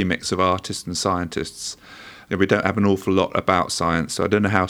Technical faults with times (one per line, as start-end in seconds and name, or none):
none